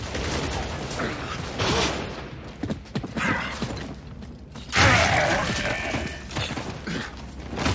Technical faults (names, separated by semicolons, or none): none